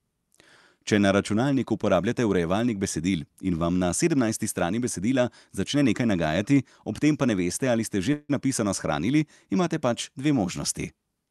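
At 8.13 s the speech hits a call audio freeze, most likely packets stalling so the jitter buffer ran dry. The receiver stretches the last sound into a fading buzz for about 156 ms, drops to brief silence, then resumes at 8.31 s with nothing lost, just running about 156 ms later.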